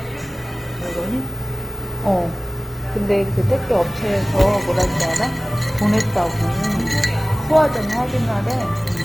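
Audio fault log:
Throughout: Opus compression, likely. The sound is grainy and rough rather than swirly, because the CELT-mode encoder keeps each band's energy but refills starved bands with folded or noise content. This fits a rate near 24 kbps, with full bandwidth reaching about 20.2 kHz.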